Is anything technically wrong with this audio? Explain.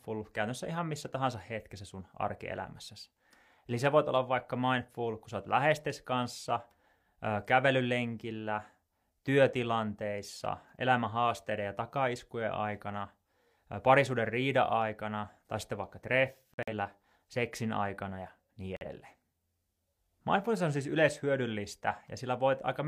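Yes. Corrupt frames were muted twice in this speech. At 16.54 s, after "aikana tai sitten vaikka", sound drops abruptly to silence for 0.19 s, which fits three rejected frames. At 18.77 s, after "seksin aikana ja niin", a 0.1 s hole fits one. The decoder discarded the damaged data and silence filled the gap. Timing stays intact.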